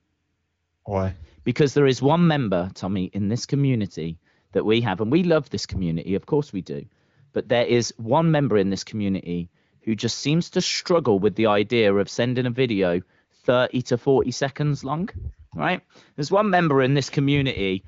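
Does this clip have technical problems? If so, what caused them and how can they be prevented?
No, this clip has no technical problems.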